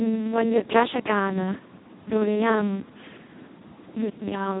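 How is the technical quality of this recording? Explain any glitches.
The technical quality is poor. Speex codec damage runs throughout: starved of excitation bits, which points to a rate near 2 kbps, the speech sounds hoarse and robotic, with nothing above 3.8 kHz.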